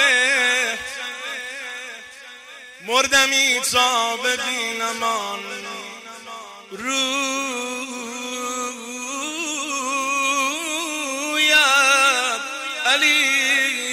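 A filter restarted on every block from 0.6 s to the end of the clip: instead of carrying its internal state from one processing block to the next, it starts each block from silence, so every block opens with a small transient. These recur 200 times a second, which points to blocks about 5 ms long, and they merge into a steady 200 Hz buzz whose loudness follows the level of the audio.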